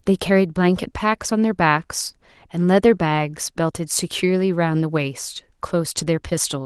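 The clip is speech, and nothing is technically wrong with it.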